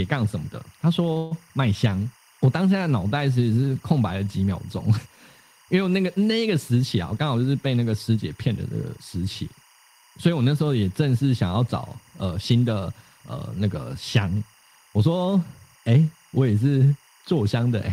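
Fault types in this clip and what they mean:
Timecode bleed: Linear timecode leaking in from an adjacent track or cable, heard throughout as a steady chirping warble near 1 and 2 kHz, about 30 dB below the speech. Its rhythm fits 24 frames-per-second code.
Call audio freeze: From 1.17 to 1.33 s the last sound is stretched into a fading buzz for 136 ms. The likely cause is delayed packets emptying the jitter buffer. The speech then resumes intact, leaving the clip 136 ms later.
Jitter buffer speed-up: From 7.12 to 8.98 s the speech runs about 8 percent fast at unchanged pitch and sounds hurried. The receiver trimmed repeated pitch-period slices totalling around 150 ms to shrink an over-full buffer.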